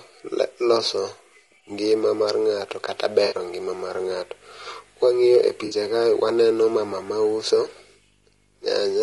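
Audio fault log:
Throughout: low-delay AAC compression. The speech sounds rough and grainy, with noise filling the gaps between harmonics and a thin, synthetic top band. This is likely AAC-ELD. Its short frames resolve pitch poorly, and the damage fits a bitrate around 32 kbps.
3.25 to 3.35 s and 5.65 to 5.75 s: AAC frame loss with concealment. Each gap is a brief smeared, noisy patch, not a dropout. The decoder rebuilt the missing audio from the last good spectrum. Each gap points to about three lost frames, some 60 ms.
4.12 s to the end, at 9.02 s: video or display buzz. A 50 Hz buzz with hash above it sits about 35 dB below the sound. A 15.6 kHz tone rides with it. A screen or video cable is coupling its field and line rates into the audio.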